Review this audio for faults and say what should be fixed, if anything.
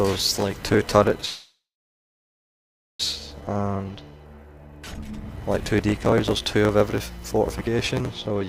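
There's a call audio freeze from 1.25 to 3.01 s: the last sound smears into a fading buzz, then about 1.4 s of silence, and the audio resumes exactly where it stopped, now 1.74 s late. That's likely delayed packets draining the jitter buffer. An adaptive jitter buffer with more headroom, plus a steadier network path, would keep it from running dry.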